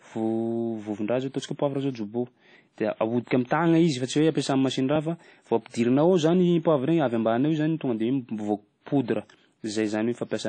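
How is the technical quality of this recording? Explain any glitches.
The speech has plainly audible compression damage throughout and one pre-echo.

Throughout, likely WMA compression at a low bitrate near 32 kbps strips everything above 9.2 kHz and coarsely quantises what remains, leaving ringing, washy speech with breathing hiss.

From 3.47 to 3.51 s, a pre-echo: the codec spread block-wide quantisation noise ahead of an attack, so a 39 ms hiss precedes "izy fa tsy", softening its onset.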